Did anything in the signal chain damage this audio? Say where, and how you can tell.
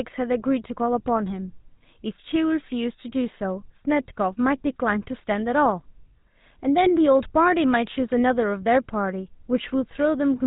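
Yes, at the codec. GSM full-rate coding runs throughout. Sparse pulse excitation makes the speech buzzy and gravelly, with nothing above 4 kHz, fitting a 13 kbps coder.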